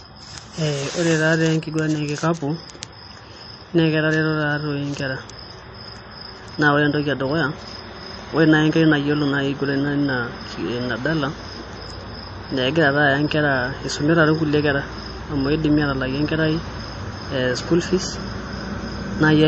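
From start to finish the speech sounds watery and swirly, with sibilants turning into metallic chirps, consonant attacks smeared, and nothing at all above about 8.3 kHz. This is plainly audible MP3 compression, likely at a starved bitrate in the region of 32 kbps. Short of bits, the encoder has chopped off the treble at a fixed point and dropped weaker frequency lines that flicker in and out from frame to frame, which produces the swirl.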